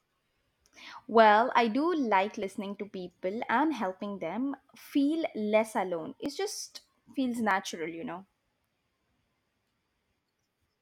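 A capture buffer was likely overwritten before the program read it, so tiny stretches of speech vanish and the edges butt together: a dropped buffer (overrun). Each gives a small skip, at 0.90 s, 2.43 s after "I do like", 6.26 s after "them feel less alone", and 7.51 s after "just feels", the last a slightly longer jump.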